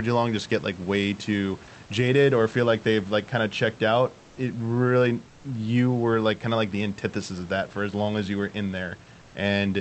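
Right after "kind of checked out", from 4.18 to 4.37 s, and again from 5.28 to 5.44 s before "you were like kind", comfort noise in place of the background takes over, likely because Opus DTX paused transmission. Each gap sounds flat and about 2 dB quieter. On a spectrogram it appears as smooth, textureless noise, and on the waveform as a slightly thinner band.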